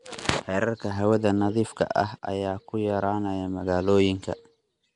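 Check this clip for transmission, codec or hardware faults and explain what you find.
One codec fault runs through the whole clip. Throughout, the speech carries a rough, hissy halo and a smeared, underwater quality, with nothing above 10.6 kHz, likely Nellymoser compression: coarse fixed-rate blocks leave weak bands noise-filled. A spectrogram shows a hard ceiling and grainy, blocky texture.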